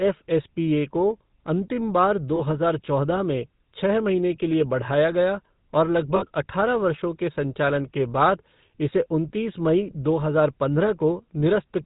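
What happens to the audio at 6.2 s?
From 6.16 to 6.25 s the speech breaks into a brief burst of lost GSM frames. When a frame fails, the decoder reuses the filter and excitation settings from the last good frame. The missing stretch is filled with a short, rough, metallic ring rather than a clean gap. The dropout is about 60 ms, which fits roughly three 20 ms frames. Because it is so short, it never fades to silence.

Underneath this, and throughout the clip, the GSM full-rate codec is plainly audible. This 13 kbps coder models the vocal tract and drives it with a sparse, regularly spaced pulse excitation. It passes nothing above 4 kHz, so the speech sounds band-limited. It also has a buzzy, gravelly roughness.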